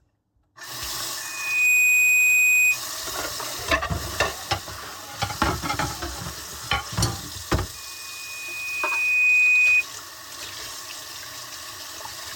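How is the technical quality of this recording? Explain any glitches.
Quality is marred by loudspeaker feedback squeal, twice. From 1.21 to 2.80 s and 7.74 to 9.85 s, a 2.5 kHz tone swells over the sound. A microphone re-amplifies its own loudspeaker until that frequency runs away. The first builds within half a second, the second more slowly.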